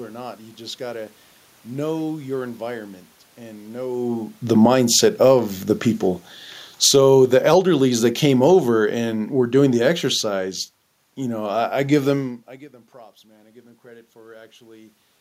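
A speech recording with automatic gain falling and automatic gain rising: the automatic gain control repeatedly adjusts itself in response to level changes, and voice and room noise rise and fall together. Right after "your environment and know", gain drops by about 5 dB from 4.46 to 5.41 s, overlapping a rise of about 5 dB from 4.73 to 5.73 s. The longest fall, about 11 dB, runs from 6.68 to 10.56 s and ends just before "you know I I". Within it, a rise of about 4 dB from 7.02 to 8.59 s briefly pushes against it. On a waveform the envelope slopes down over these spans rather than stepping, and on a spectrogram the whole frequency range dims uniformly, including the noise floor between phrases. That shared dimming is what separates these faults from a talker simply turning away. After "them I give them", the speech arrives roughly 22 dB quieter, fitting the talker moving back around 12 s. 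The control responds by raising gain about 4 dB from 12.92 to 15.04 s. The waveform envelope and the background texture thicken together over those two seconds, and the spectrogram's low-level noise band brightens along with the speech, showing that the room noise is being lifted by the gain rather than changing on its own.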